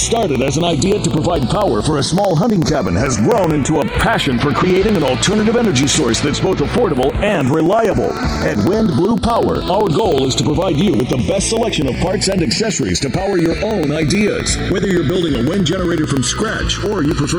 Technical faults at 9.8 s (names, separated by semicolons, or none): channels drifting apart; periodic USB or driver dropouts